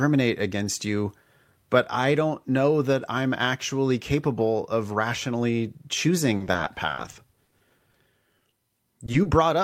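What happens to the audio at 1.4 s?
Nothing goes wrong at 1.4 s; the speech runs on intact through that moment with no dropout, click or distortion.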